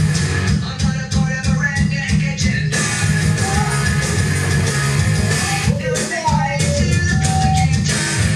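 Loudspeaker feedback squeal appears from 7.11 to 7.67 s: a steady 761 Hz tone swells over roughly a third of a second to about 5 dB above the sound. A microphone is hearing its own loudspeaker, and at that frequency the loop gain passed one.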